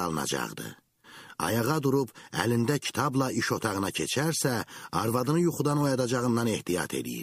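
Nothing stood out on listening to this audio.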